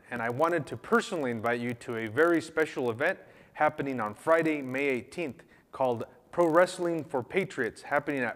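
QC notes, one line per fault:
Throughout: block size mismatch (padded). One stage hands over blocks slightly shorter than the next stage reads, so each block is topped up with zeros, about one sample of silence. Those tiny regular gaps produce a buzz at about 43.1 Hz, which fits a 1024-sample read block. The audio runs at 0.999 of normal speed, a barely perceptible slowdown, with pitch essentially unchanged.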